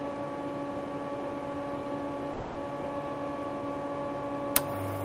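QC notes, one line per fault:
2.33–2.57 s, long network dropout: a fading buzz fills 0.22 s, too long for one lost packet; audio resumes with that part gone, likely a stalled stream.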